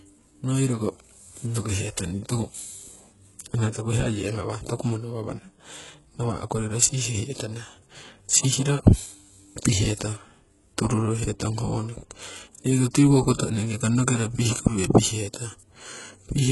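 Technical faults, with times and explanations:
Throughout, HE-AAC compression: heavy damage, s sounds gritty and metallic up to 11.5 kHz, treble likely rebuilt from copied lower bands rather than simply dulled.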